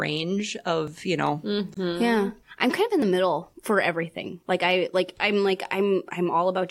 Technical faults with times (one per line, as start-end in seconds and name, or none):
0.87 dropped buffer (overrun)
1.74-1.77 gap at a join of encoded pieces
3.02 dropped buffer (overrun)